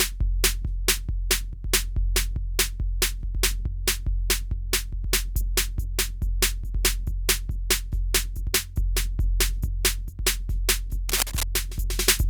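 Cable scratch noise runs from 11.09 to 11.43 s: a dense, uneven burst of scratching and rustling sits over the music, only slightly quieter than it. The likely cause is a worn cable or connector being moved, its contact resistance fluctuating rapidly.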